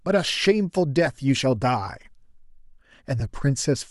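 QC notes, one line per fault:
1.06 s and 3.20–3.22 s, lost LE Audio frames: each gap is a brief grainy blur in the speech, about 10 ms long, with no drop to silence. The length fits a single lost 10 ms frame. To fill the missing frame, the decoder reused the last good spectrum with its phases scrambled, which sounds like a quick noisy smear. Because each loss was so short, the decoder never reached the point where that fill fades toward silence.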